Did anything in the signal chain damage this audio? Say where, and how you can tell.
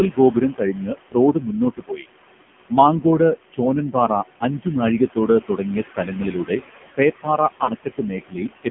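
Yes, three things went wrong, all in the call path.

Noise suppressor artifacts, at the call-processing stage, run the whole clip. The room noise, which sits about 13 dB under the speech, gets pulled down by about 18 dB in the gaps and then comes back up under the speech. That pumping gives it away. The suppressor decides frame by frame which bands are noise and cuts those, so the leftovers shift around instead of staying steady.

The AMR narrowband mobile codec is also on throughout. Everything above 4 kHz is gone, and what's left sits roughly in a 150 Hz to 3.4 kHz phone band. The damage is heavy: the voice sounds buzzy and synthetic, which points to a low mode around 5.9 kbps. AMR-NB rebuilds speech from a vocal-tract model plus a handful of pulses, and at that rate there aren't enough bits to make it sound natural.

Lost AMR speech frames show up on the network side, from 7.64 to 7.72 s, about 40 ms long, which fits roughly two dropped 20 ms frames. 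You hear the sound smear and sag there. The decoder is repeating the last good pitch and filter settings at falling gain, so the audio stretches and dips. When good frames return, the voice comes back a bit weak and rough for a moment.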